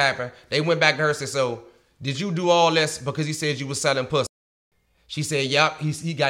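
At 4.27 s the speech cuts out abruptly into silence and stays silent for about 0.45 s, until 4.72 s. This is a playback stall, most likely the player running out of buffered data or having its output thread blocked until it recovered.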